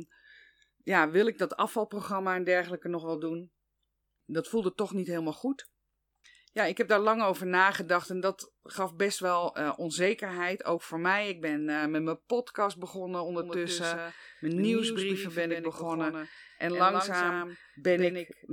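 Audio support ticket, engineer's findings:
Doubled audio track from 13.42 s, right after "met mijn podcast begonnen", running to the end. Second full-band copy of the speech trails by around 150 ms, roughly 5 dB down. Likely a parallel capture path or an edit holding two out-of-step copies. Not echo or room reverb: one repeat only, no decay tail, no room colouration, and it switches on abruptly rather than building up.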